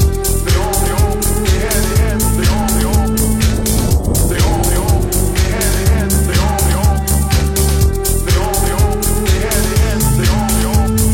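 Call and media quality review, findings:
No call or media quality findings to report for this clip.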